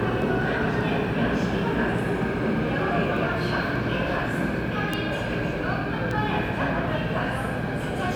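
From 0.22 s to 7.88 s, sharp ticks of uneven strength recur at a steady rate of roughly one every half second, about fifteen in all. These are word clock ticks. The receiving device on a digital link was running from its own clock instead of locking to the sender's, with the two differing by something like 40 parts per million. Each time they drifted a full sample apart, a single sample was dropped or repeated, leaving a brief discontinuity that is heard as a tick.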